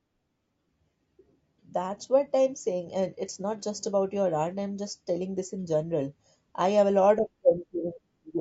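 Throughout the speech the voice sounds rough and grainy, with noise filling the gaps between pitch harmonics and a thin, artificial top band. This is likely low-delay AAC compression: short frames resolve harmonics poorly, and the plainly audible damage fits a bitrate near 32 kbps.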